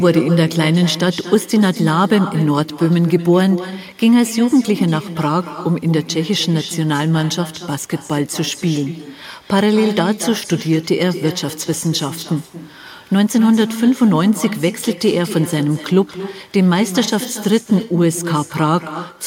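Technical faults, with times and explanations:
Throughout, echo with no canceller: every phrase of the speech returns about a fifth of a second later as a quieter, thinner copy, around 12 dB down. The far end's loudspeaker feeds its microphone, and since nothing subtracts it, your own voice rides back across the network.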